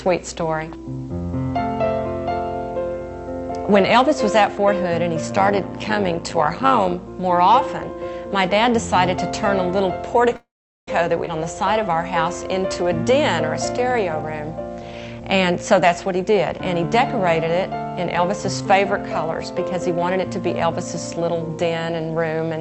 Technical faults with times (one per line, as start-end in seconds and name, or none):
5.28-6.97 overlap-add ripple
10.36-10.88 call audio freeze
11.25-11.28 skip ahead
11.73-13.93 jitter buffer slow-down
14.80-22.34 jitter buffer speed-up